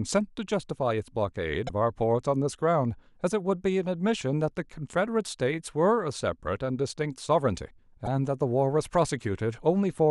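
Damaged data in a compressed stream, at 1.66 to 1.70 s and 8.03 to 8.07 s, makes the decoder misread corrupted frames and lose sync, leaving brief glitches in the speech.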